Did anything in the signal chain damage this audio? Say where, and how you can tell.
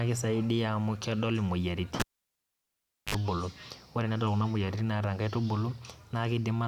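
Yes. At 2.00 s a pop cuts the speech to near silence for about 1.1 s, then a 54 ms burst of 50 Hz buzz and a second pop bring it back at 3.15 s. This is a cable pulled and plugged in on the analogue wiring. The buzz is mains hum picked up while only the plug tip made contact.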